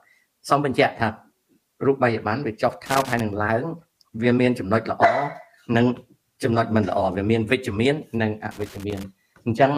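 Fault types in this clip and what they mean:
Loose connector crackle: a worn contact chops the signal into two brief, irregular scratchy bursts, unlike the continuous, evenly spread texture of hiss or vinyl crackle.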